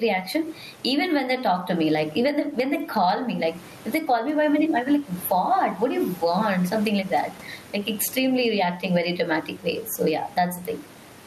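Gain pumping runs through the whole speech clip. The level keeps breathing. The room noise sits about 32 dB below the speech. The swing is roughly 15 dB. The likely cause is gain set far too high, with a fast limiter clamping each loud moment. Loud and quiet parts end up squeezed together.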